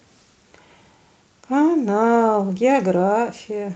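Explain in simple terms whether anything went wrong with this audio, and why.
Nothing went wrong here.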